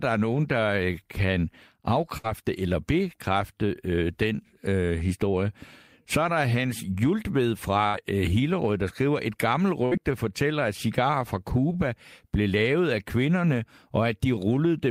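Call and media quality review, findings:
Burst of packet loss on the network path: about 60 ms of packets lost per event. Concealment stretches the last sound into a held, fading tail, then playback skips ahead. At 2.17–2.28 s (before "eller bekræfte øh den"), 7.87–7.97 s, and 9.85–9.94 s (between "der skriver et gammelt" and "fortæller at cigarer fra").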